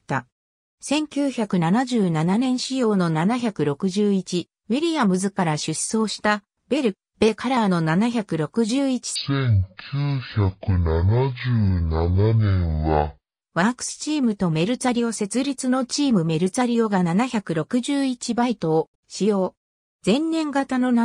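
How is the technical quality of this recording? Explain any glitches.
One clear glitch: a section at the wrong speed from 9.16 to 13.42 s. Over that stretch the sound drops abruptly to a deep, dragging register, moving at half speed and sitting about ten semitones lower, then snaps back to normal. Because speed and pitch fall together rather than independently, the likely cause is that this segment was played back or rendered against the wrong clock, halving its rate.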